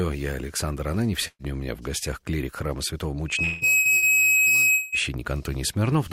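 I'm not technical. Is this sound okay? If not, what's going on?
No, it has three kinds of fault.

A burst of packet loss occurs at 1.27 s, 3.79 s and 3.97 s. Each time a small chunk of audio failed to arrive, so the last sound is briefly held as a fading buzz or hiss. The audio then jumps ahead, skipping about 120 ms the first time and about 60 ms the other two times.

From 3.28 s to 5.11 s there is a loudspeaker feedback squeal. A steady whistle near 2.6 kHz swells up within about a third of a second and keeps going. This is the microphone picking up its own loudspeaker and amplifying that one pitch in a loop.

At 3.43 to 3.64 s and 4.74 to 4.95 s, the sound stretches into a fading buzz or hiss instead of continuing normally, and about 180 ms is skipped each time. The likely cause is a long network dropout, a longer gap in delivery than the short bursts.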